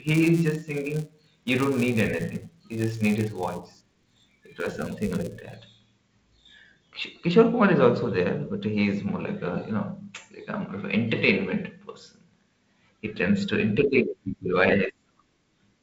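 Speech clip, and for the first 5.57 s there's a buzz riding under it at about 172 Hz. It's a filter restarted on every block: the filter drops its memory at each block boundary and starts again from zero, so every block opens with a tiny transient. Those ticks repeat fast enough to fuse into a buzz, which fits a 256-sample block, and it swells and fades with the speech level. The audio also went through G.722 wideband telephone coding at 48 kbit/s, with little above about 7 kHz and a slight grain from the codec.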